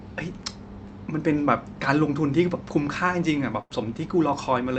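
A burst of packet loss interrupts this speech recording between 3.61 and 3.72 s. The receiver stretched the last received sound over about 85 ms, fading it down, then resumed with roughly 80 ms of speech skipped outright.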